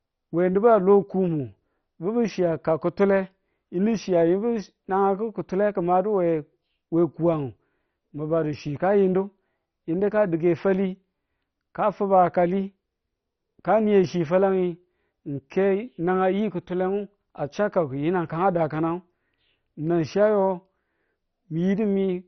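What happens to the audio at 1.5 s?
At 1.5 s the speech is dull and gurgling, with a granular roughness, and that quality runs through the whole clip rather than starting there. It is likely MP2 compression at a very low rate, around 32 kbps: the encoder shuts off upper sub-bands and quantises the rest coarsely. On a spectrogram, energy stops abruptly near 6.1 kHz, with blotchy, flickering patches below where bands switch on and off.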